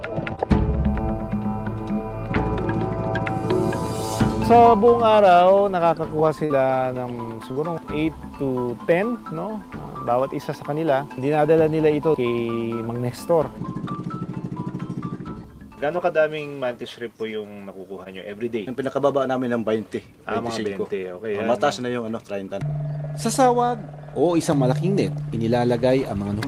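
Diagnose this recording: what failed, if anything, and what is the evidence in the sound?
The network stage failed, with short concealed packet loss at four points: 0.35 s, 6.45 to 6.52 s, 7.52 to 7.58 s and 18.04 s. Each is a brief smear or wobble where the audio was rebuilt, not received. The filled stretches last 21, 44, 39 and 15 ms. Those gaps fit lost 20 ms packets, one or two at a time. The receiver extended the preceding sound to cover each hole, then blended back into real audio.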